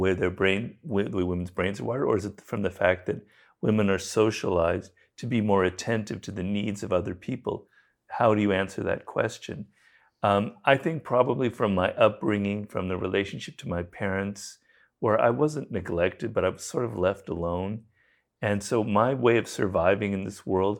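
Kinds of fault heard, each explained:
No technical fault can be heard anywhere in the speech. There is nothing here to list or explain.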